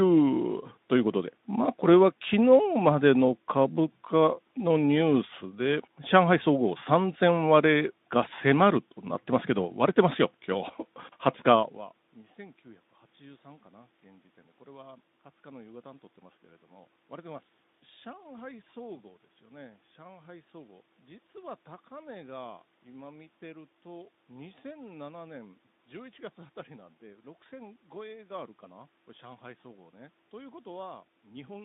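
Nothing goes wrong on the technical side anywhere in this speech recording, so there's no fault to walk through.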